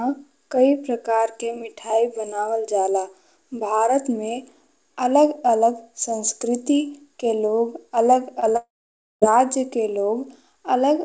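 A brief smear at 8.40 to 8.44 s and another at 8.52 to 8.56 s are short concealed packet loss. About 20 ms of the speech went missing each time. The decoder stretched the preceding sound to fill each gap, then blended back into the real audio.

Straight after, from 8.56 to 9.24 s, the sound turns into a fading buzz or hiss and then falls silent for just over half a second. This is most likely a long network dropout. About 660 ms of speech never arrived, and the synthetic continuation died away before the real audio resumed with that stretch lost. The call path itself has nothing above 8 kHz, which fits a wideband codec such as G.722.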